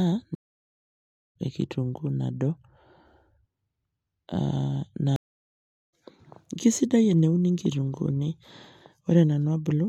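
Two stream reconnects occur. At 0.35 s the speech drops out for about 1.0 s, resuming at 1.35 s roughly a second further on; at 5.16 s a 0.77 s gap ends at 5.93 s, skipping about half a second. Each time the connection dropped and a fresh decoder restarted mid-stream.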